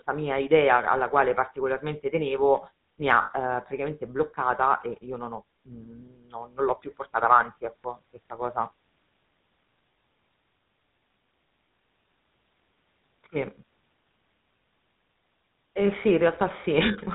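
Speech with a buzzy, gravelly roughness throughout and nothing above 4 kHz, the plainly audible signature of the GSM full-rate codec, which fits a 13 kbps stream. It rebuilds the voice from a vocal-tract model excited by a sparse, regularly spaced pulse train, and that coarse excitation grinds against the voice's natural pitch. From 3.22 to 3.32 s the sound freezes into a brief rough, metallic ring. That is lost GSM frames: the decoder repeats the last good frame's settings to cover the gap, and the 80 ms of missing audio fits four 20 ms frames.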